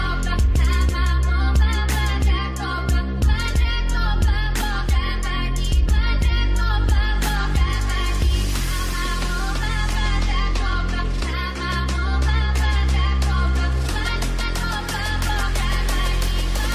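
No technical faults can be heard anywhere in this audio. There is no event that needs a time mark or an account of what went wrong.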